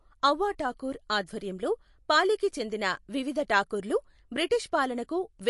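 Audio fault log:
throughout: MP3 compression, likely. The speech stops dead at 11.3 kHz and carries plainly audible watery swirl, which fits a starved bitrate near 48 kbps. A spectrogram shows a flat ceiling there, with sparse components below blinking on and off frame to frame.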